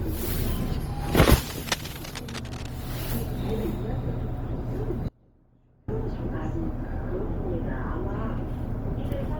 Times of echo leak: none

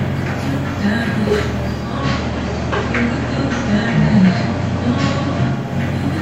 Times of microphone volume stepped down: none

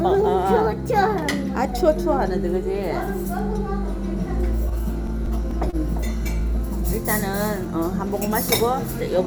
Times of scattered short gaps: 4.69-5.76

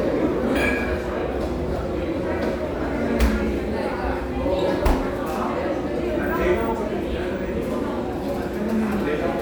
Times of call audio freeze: none

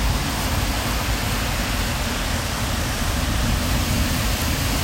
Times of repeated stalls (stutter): none

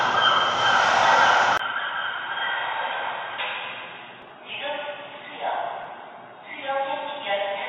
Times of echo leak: none

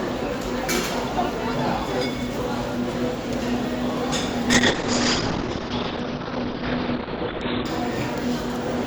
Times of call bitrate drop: 4.53-7.71

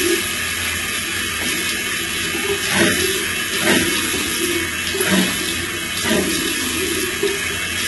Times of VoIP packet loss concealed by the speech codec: none

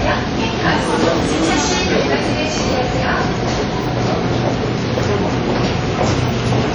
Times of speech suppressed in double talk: none

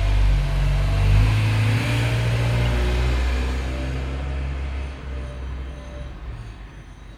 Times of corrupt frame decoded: 2.65

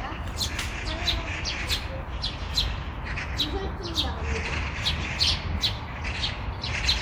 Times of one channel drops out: none

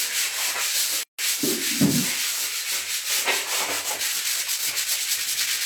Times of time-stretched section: 3.79-5.65

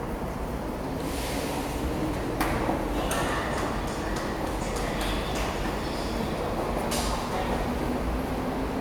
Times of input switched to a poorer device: none

